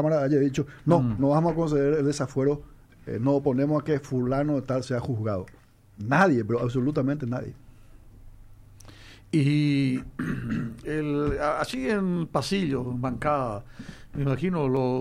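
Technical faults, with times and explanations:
No technical faults can be heard anywhere in the clip. There is nothing here that calls for a time or an explanation.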